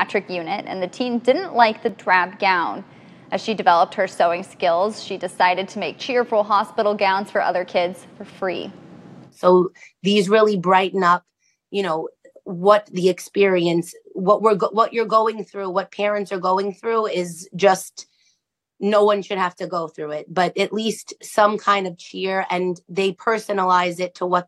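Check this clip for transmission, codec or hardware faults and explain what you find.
One fault is present: a block of digital silence at 1.89 s. It lasts about 1.45 ms, which fits a 64-sample block. The output buffer was likely not filled in time, so zeros went out. The abrupt drop and return produce a brief tick or dip.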